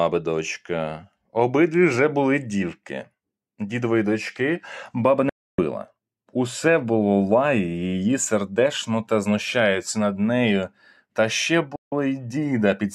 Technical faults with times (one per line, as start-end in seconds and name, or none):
5.29-5.59 digital broadcast dropout
11.76-11.92 digital broadcast dropout